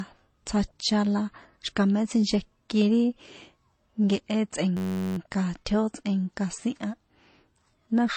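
Throughout, the speech carries mixed smeary and swirly coding artefacts with nothing above 9 kHz, likely transcoding between lossy codecs, consistent with low-bitrate MP3 re-encoded to HE-AAC. From 4.77 to 5.17 s, a system hang loop repeats one 10.67 ms chunk, which fits a 512-sample buffer, producing a steady 93.8 Hz buzz.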